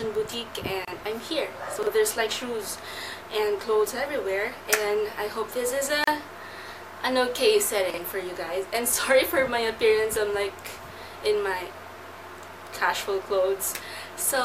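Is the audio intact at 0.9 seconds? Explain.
No. From 0.85 to 0.88 s the sound drops into a 27 ms hole with smeared edges, then resumes: a gap at a join of encoded pieces, where encoder start delay and end padding were left untrimmed.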